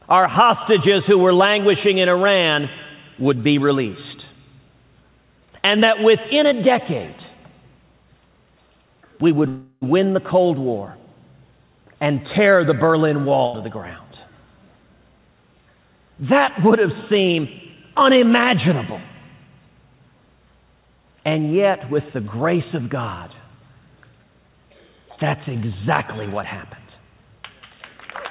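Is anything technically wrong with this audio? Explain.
Yes. Three call-path faults are audible, and the whole clip has nothing above 4 kHz, which fits a narrowband G.711 call codec.

From 9.48 to 9.85 s there is a call audio freeze, most likely from packets held up in transit that left the jitter buffer empty. The last sound is stretched into a fading buzz or hiss for about 340 ms, ending in roughly 30 ms of silence. The audio then resumes exactly where it stopped, so a pause is inserted and nothing is lost.

From 13.46 to 13.57 s there is a burst of packet loss. The receiver extends the last sound as a decaying tail for about 74 ms. Unlike the freeze, the audio then picks up about 80 ms further on, so that stretch is actually missing.

From 22.16 to 22.87 s there is a jitter buffer speed-up. To reduce excess delay, the receiver trims short pitch-period slices, about 50 ms in total, so this passage plays at 106% speed. 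The pitch stays unchanged, which distinguishes it from a sped-up recording, and nothing is dropped in a single audible gap.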